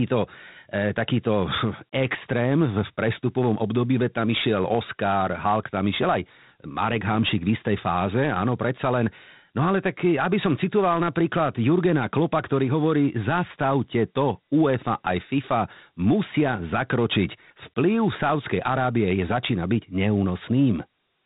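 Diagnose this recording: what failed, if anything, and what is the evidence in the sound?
Codec stage: Dialogic VOX ADPCM across the whole speech clip. Spectrogram shows nothing above 3.8 kHz; gritty hiss tracks each phrase from coarse 4-bit steps, which fits 32 kbps.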